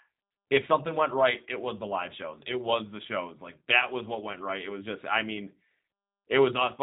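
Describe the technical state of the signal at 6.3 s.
At 6.3 s the speech carries G.729 codec damage running through the whole clip: rebuilt from a vocal-tract model and sparse pulses, it sounds rough and synthetic, with nothing above 4 kHz, unlike a plain low-pass filter.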